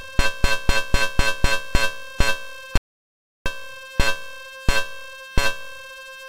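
The audio has an audio dropout to silence from 2.77 to 3.46 s. The 684 ms gap is silent with no room tone, likely from a lost input.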